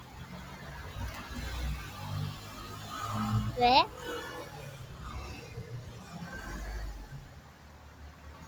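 From the start, a speech-tuned noise suppressor has been left running on this non-speech sound. It treats steady tones, ambience and tails as noise, so attacks pass while sustained parts sink by around 10 dB, giving a pumping, thinned texture rather than a compressor's even breathing.

From 7.26 to 8.46 s, the sound is cut by the noise suppressor more than the rest, dipping by about 5 dB at its deepest over roughly a second. Unlike a fade or dropout, sudden onsets mostly come through while the steady, decaying portion is pulled down and shortened.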